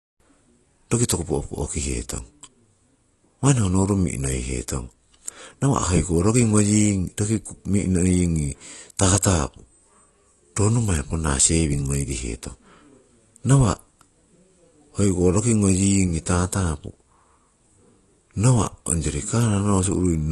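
From start to finish the speech carries plainly audible AAC compression damage, most likely from AAC-LC at a low bitrate, which fits something around 32 kbps. The encoder has discarded everything above 12.1 kHz, so the top end sounds dull, and coarse quantisation leaves a smeared, warbling texture on sustained sounds and a fizzy edge on sibilants. A spectrogram would show a hard ceiling at 12.1 kHz across the whole clip.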